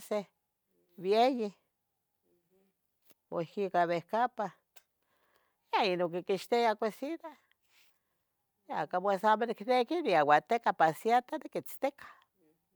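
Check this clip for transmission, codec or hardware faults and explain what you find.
No transmission, codec or hardware faults are audible here.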